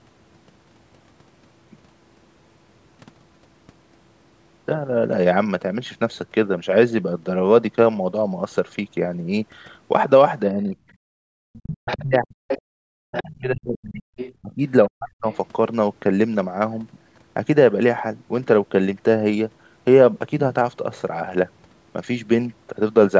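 Speech suppressed in double talk affects this speech recording at 10.54–10.76 s with a shallow dip of about 5 dB, then much harder at 11.2–12.48 s and 12.97–15.27 s, where the talker drops by roughly 40 dB. The likely cause is an echo canceller that could not tell the talker from loudspeaker echo while both sides spoke, and so turned everything down. The other side's voice leaking through appears at 11.56–12.02, 12.48–12.62, 13.12–13.40, 14.17–14.33 and 15.30–15.37 s as a second voice. It sits roughly 5 to 15 dB below the talker, and far fainter in the last scrap. That is likely loudspeaker playback the canceller failed to remove from the microphone.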